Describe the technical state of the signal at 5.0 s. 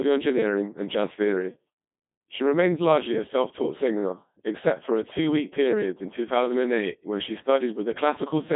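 At 5.0 s you're hearing the Codec 2 vocoder, and it runs through the whole clip, not just that moment. The decoder isn't rebuilding the original waveform. It resynthesises the speech from sine waves driven by pitch, voicing, energy and a spectral envelope, so the voice comes out robotic and buzzy with heavy damage. The band sits roughly 150 Hz to 3.6 kHz with nothing above 3.8 kHz, which fits a low-rate mode around 2.4 kbit/s.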